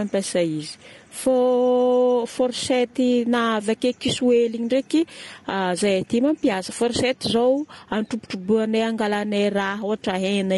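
Throughout the speech, the sound is plainly rough and grainy, with noise between harmonics. The likely cause is low-delay AAC compression (AAC-ELD), whose short frames are starved at a rate consistent with 32 kbps.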